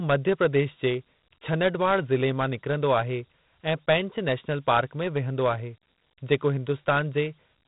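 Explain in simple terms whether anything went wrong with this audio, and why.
A gritty, sandy hiss clings to the speech from start to finish, growing louder whenever the talking gets louder, and sharp consonants sound rough and broken. The whole clip is also dull and muffled, with nothing above about 3.9 kHz. That is 4-bit ADPCM compression, applied heavily. Each sample is stored as only a tiny step from a guess, so the errors become that level-following grit. The missing top end suggests a low sample rate, likely around 8 kHz.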